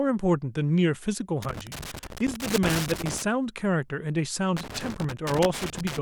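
From 1.42 to 3.22 s, and again from 4.57 to 5.99 s, the speech is broken by loose connector crackle: a worn or dirty contact keeps opening and closing as it shifts, chopping the signal. It sounds like ragged, irregular scratching. Unlike digital dropouts, which leave clean, evenly shaped gaps, these bursts are uneven and gritty, and they cluster within each stretch rather than recurring at a steady rate.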